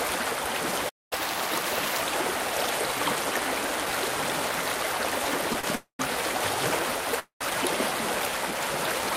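At 0.89 s the sound just drops out for about 222 ms, a playback stall, most likely the player running dry or its thread getting blocked, before it resumes at 1.13 s from where it stopped.

Right after, from 1.13 to 2.02 s, you get catch-up at higher speed. The player races through its backlog at 1.25 times normal speed, so everything sounds hurried and sits around four semitones sharp, then settles back to normal pitch and pace.

Around 5.60 to 5.66 s there's a short stall from a late packet. One packet missed its slot, the jitter buffer emptied, and the receiver held the last bit of sound for about 30 ms. Nothing is lost, but that moment drags with a faint buzz or dip.

Then come two call audio freezes. From 5.75 to 6.02 s the last sound is stretched into a fading buzz or hiss and then goes silent for about 120 ms, 240 ms in all. At 7.19 to 7.44 s the same happens over 214 ms, again with about 120 ms of silence. 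Both are likely packets held up in transit. The audio picks up exactly where it left off, so nothing is missing, but a gap has been pushed into the flow.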